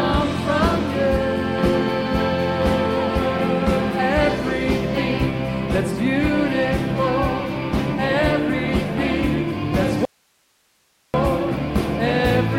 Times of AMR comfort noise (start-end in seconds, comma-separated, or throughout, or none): none